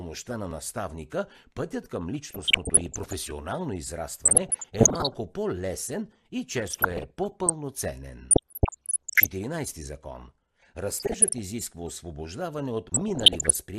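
MP2 compression runs through the whole speech clip. The dull, gurgling top end and the grainy texture are most likely the work of MPEG Layer II coding at a low rate, around 80 kbps by the sound of it. The codec divides the signal into 32 sub-bands and shares out too few bits, so upper bands drop out and flicker while the remaining ones are quantised coarsely.

DAB burbling appears at 2.24–3.13 s, 4.25–5.16 s, 6.57–7.52 s, 8.31–9.27 s, 11.00–11.38 s and 12.89–13.59 s. In each burst, bit errors of roughly 0.5 to 1.5 percent have slipped through error correction into the MP2 data. Corrupted samples put short blips of noise into single sub-bands, and corrupted scale factors make sub-bands jump in level for up to a frame. The result is a bubbling, blipping disturbance over the speech, and it is harshest in the 8.31 s burst.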